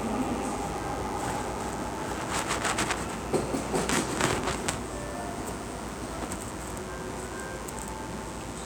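A mains buzz runs from start to finish under these everyday sounds. It sits on a 50 Hz base. Something in the chain, such as a dimmer, a rectifier or a poorly shielded cable, is injecting sharp switching spikes. They arrive twice per mains cycle, so the buzz repeats 100 times a second. Its harmonics stretch up into the kilohertz range. The result is a steady, raspy drone. It sits well up, roughly 15 dB below the wanted sound.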